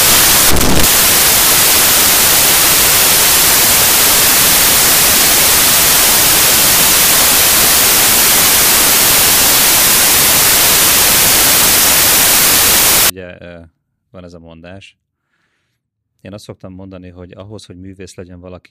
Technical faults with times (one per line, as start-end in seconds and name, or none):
0.00-13.10 samples built from the wrong bytes